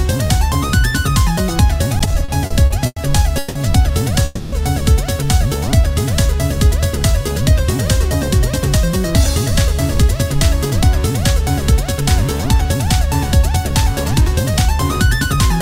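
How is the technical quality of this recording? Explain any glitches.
The recording has clear network-playback faults: stuttering, a freeze, and several sped-up stretches.

From 1.99 to 3.57 s there are repeated stalls (stutter). Packets arrived late, so the jitter buffer kept running dry. Ten gaps totalling 440 ms, the longest 170 ms, were filled by continuing earlier sound. It drags, and the spectrogram shows smeared, repeated-looking patches.

From 4.25 to 4.54 s there is a call audio freeze. This 270 ms hold is likely caused by delayed packets. The last sound is stretched into a fading buzz or hiss with no silence, visible as a flat, fading band.

Jitter buffer speed-up follows at 8.03 to 10.03 s (103%, roughly 50 ms removed), 11.71 to 14.45 s (104%, roughly 100 ms) and 15.19 to 15.60 s (109%, a few tens of ms). Short pitch-period pieces were cut, so the audio runs faster at unchanged pitch, with the last stretch sounding hurried, and the waveform looks slightly compressed in time.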